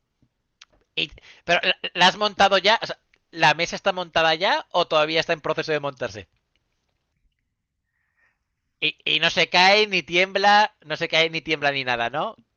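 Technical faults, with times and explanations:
No technical faults can be heard in the speech. It has come through a WebRTC call path working normally, with an Opus-style codec whose top end stops at about 12 kHz, which fits a setting of around 40 kbps.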